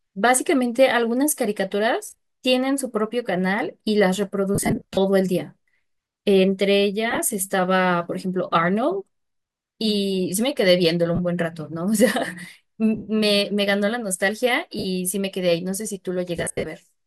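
Lost LE Audio frames break up the speech at 2.07–2.14, 4.55–4.97, 7.11–7.19, 11.15–11.19, 12.96–13.08, 14.79–14.85 and 16.37–16.66 s. The decoder fills each gap with a noisy, randomised copy of the last spectrum. Unlike hard dropouts, these gaps smear rather than fall silent, and they fit the likely 7.5 ms LC3 framing.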